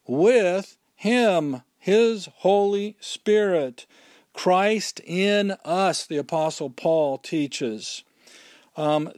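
No technical fault can be heard anywhere in the speech recording, and the signal stays continuous and steady throughout.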